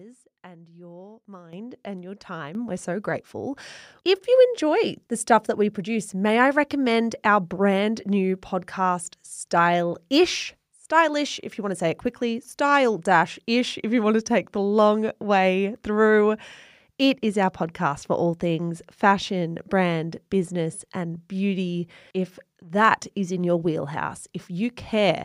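A speech clip with two microphone volume stepped up faults: at 1.53 s and 2.55 s, both around "and your", voice and background jump together by about 9 dB and about 8 dB, seen as abrupt waveform envelope steps and brighter spectrogram bands.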